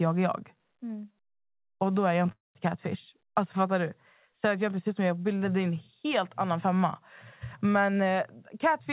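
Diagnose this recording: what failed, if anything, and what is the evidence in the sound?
Call audio freeze at 2.32 to 2.57 s, in the network and jitter-buffer stage. The speech stretches into a short fading buzz or hiss, then about 180 ms of silence, and resumes where it stopped. That inserts a 0.23 s gap with nothing lost, likely from delayed packets draining the buffer.

Jitter buffer speed-up from 7.93 to 8.88 s, in call processing. The speech runs at 113% speed with pitch unchanged and sounds hurried. The receiver is cutting repeated pitch-period slices, around 150 ms in total, to shed surplus buffered delay. Throughout, the band stops at 4 kHz.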